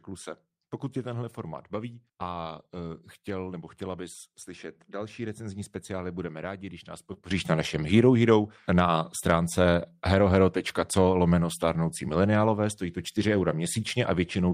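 Just after "budeme rádi když nás", from 7.13 to 7.17 s, there is a brief smear where the speech stalls and blurs. This is short concealed packet loss. About 20 ms of audio arrived too late for the decoder, and the receiver bridged the gap by extending the preceding sound for roughly 15 ms before rejoining the real signal.

At 7.31 s the speech and its background noise step up together by about 12 dB and stay louder until the end of the clip. This is a sudden gain jump, likely from a digital gain setting applied instantly rather than ramped in.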